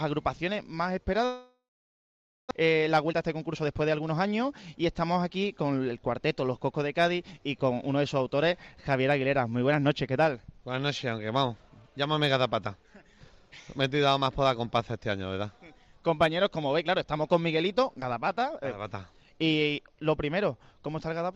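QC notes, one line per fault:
1.25–2.53 s, long network dropout: the sound smears into a fading buzz, then sits silent for about 0.91 s before resuming. About 1 s of audio never plays, likely because packets stopped arriving while the receiver concealed the gap and then gave up.
2.61–4.25 s, jitter buffer speed-up: the sound runs about 113% fast at unchanged pitch and feels hurried. After the dropout the buffer held surplus audio, so the receiver trimmed short pitch-period slices repeatedly, removing roughly 0.2 s to cut the delay.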